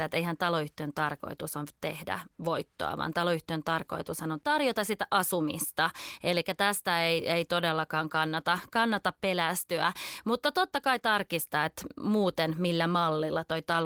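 No technical faults can be heard in this speech clip. The Opus voice compression keeps the full audio band and leaves only a light coding texture, which fits a hybrid mode at around 20 kbps.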